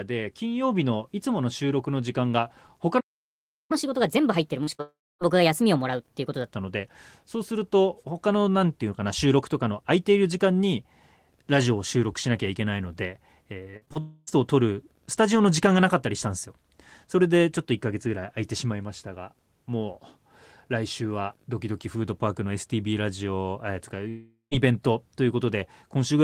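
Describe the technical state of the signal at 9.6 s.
At 9.6 s the speech signal is intact, with no audible fault at that moment.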